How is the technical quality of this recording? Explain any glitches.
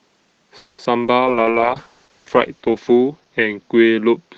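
The recording has clear network faults in roughly its first second and reduced coding quality from 1.2 s to the end.

Call audio freeze, 0.57 to 0.80 s: packets were likely delayed, emptying the jitter buffer. The last sound is stretched into a fading buzz or hiss for about 210 ms before the audio resumes without losing anything.

Short concealed packet loss, 0.84 to 0.87 s and 1.03 to 1.06 s: about 20 ms of audio missed the decoder each time, and the receiver patched the hole by extending the preceding sound. Each gap is heard as a brief smear or wobble.

Call bitrate drop, 1.2 s onward: the bandwidth estimate fell and the Opus encoder went from 32 to 8 kbps, staying at its lowest for 1.25 s. The sound turns rough and watery as the coding gets coarser, on top of the existing 8 kHz ceiling.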